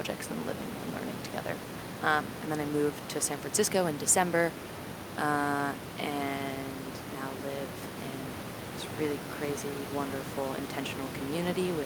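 Nothing goes wrong anywhere in this speech clip, and the only thing under it is the room's own background noise, sitting about 11 dB below the speech as part of the recording.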